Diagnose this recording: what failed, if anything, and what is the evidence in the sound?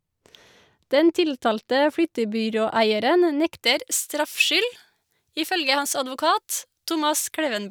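At playback the matching de-emphasis was never applied, so pre-emphasis was left on from 3.64 s to the end of the speech. The treble boost added for recording or transmission stays in the signal, with 10 kHz sitting about 11 dB above 1 kHz, which fits a J.17 curve left uncorrected. From that point the sound turns thin and bright, with sibilants hissing and splashing.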